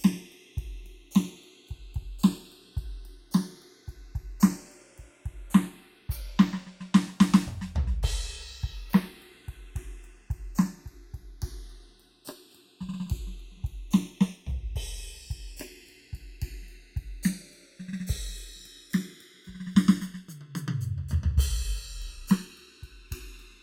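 Across the whole music clip, the channels are drifting apart. Each side runs on its own clock, off by roughly 50 ppm. The delay between them creeps up to under a millisecond by the end. Summed to mono, comb notches sweep slowly, giving a slow flanging.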